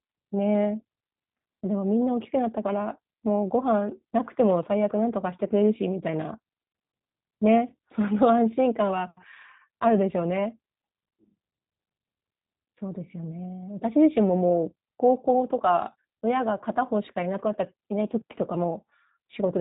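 Throughout, the speech sounds rough and synthetic, cut off above 3.8 kHz: plainly audible G.729 codec damage, rebuilt from a vocal tract model and sparse pulses.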